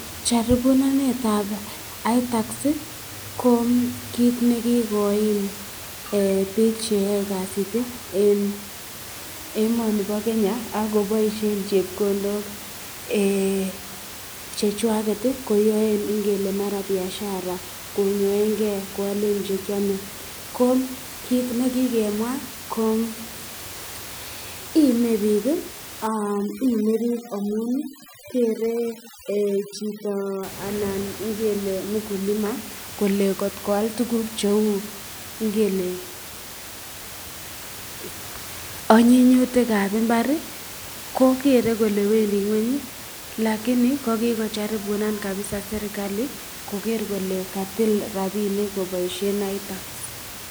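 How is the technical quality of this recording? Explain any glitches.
One glitch stands out, in the speech between 26.07 and 30.43 s: overdone noise removal. A noise reduction stage was pushed far too hard there, cutting any frequency band that sat close to its noise estimate, so the quieter parts of the voice were stripped out along with the noise. For those four seconds or so the background drops and breaks up into twinkling specks. Outside that stretch, the room noise sits about 14 dB below the speech.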